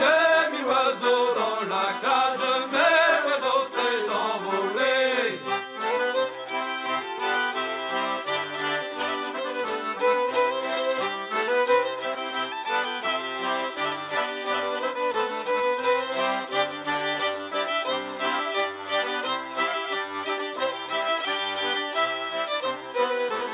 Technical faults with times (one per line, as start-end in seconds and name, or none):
none